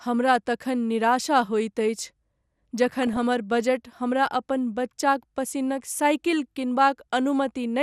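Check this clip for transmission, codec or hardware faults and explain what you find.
Two faults are present: low-rate MPEG Layer II coding across the whole recording, and a short DAB burbling burst.

Throughout the speech, the sound is dull, with a gurgling, granular edge. This is likely MP2 compression at a bitrate that points to around 80 kbps. Too few bits reach each sub-band, so upper bands drop out and flicker, and the remaining bands are coarsely quantised.

From 3.03 to 3.23 s, just before "बजट हमरा", DAB burbling appears. Bit errors, roughly a few in every thousand, slipped past error correction into the audio data, corrupting samples over what fits several consecutive frames. Short blips of noise appear in single sub-bands.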